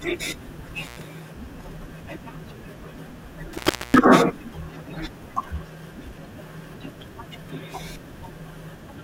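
From 0.83 to 1.02 s, and again from 3.53 to 3.98 s, the speech is broken by an intermittent contact: a loose plug or cable opens, cutting the signal for about 100 ms, then about 360 ms. Crackle marks each break's edges, with faint hiss in the gap, unlike a clean digital dropout.

At 5.27 s comes DAB burbling. Weak reception lets a bit error rate well under one percent slip past error correction, so wrong samples put short blips of noise into single sub-bands across six frames. The result is a brief burst of noise blips laid over the audio rather than a silence.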